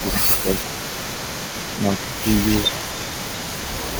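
From the start to 3.99 s an echo leak runs under the speech. A faint copy trails the speech by 260 ms, roughly 15 dB down. It is likely a loudspeaker echo the far canceller failed to remove, distinct from room reverb because it repeats discretely rather than smearing.

From 0.0 to 0.48 s the speech is suppressed in double talk, dipping by roughly 10 dB for a few hundred milliseconds. A shorter, shallower dip of roughly 5 dB follows at 2.68 to 2.78 s. The likely cause is the canceller ducking the near talker while echo overlaps it.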